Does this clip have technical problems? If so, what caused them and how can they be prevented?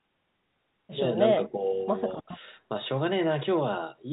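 No, no technical problems found.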